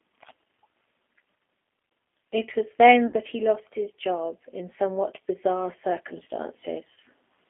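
Throughout, the speech passes through a G.729 codec line limited to roughly 250 Hz to 3.5 kHz. The low-rate pulse-excited resynthesis at 8 kbit/s is plainly audible, leaving the speech intelligible but rough, thin and slightly synthetic.

From 3.07 to 3.14 s, between "was then" and "that he lost his", VoIP packet loss concealed by the speech codec fills a 60 ms hole, which fits two lost packets, with a fading extension of the preceding pitch and spectral shape. At 6.94 to 6.98 s a shorter 30 ms loss, consistent with one packet, produces the same brief smeared, decaying sound.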